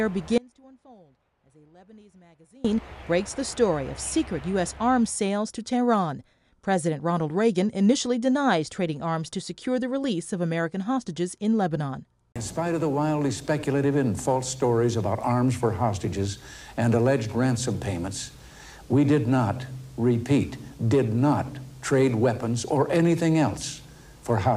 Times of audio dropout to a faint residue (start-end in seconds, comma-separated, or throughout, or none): 0.38-2.64